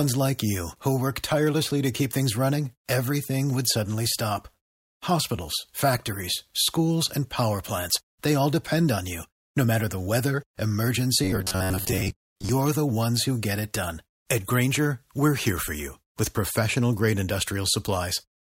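Robotic sound from repeated short buffers runs from 11.24 to 12.49 s, just before "the ones who get". Audio likely arrived too late, so roughly half the stretch replays a segment of about 10.7 ms, imposing a fixed 93.8 Hz metallic buzz that loosely tracks the speech.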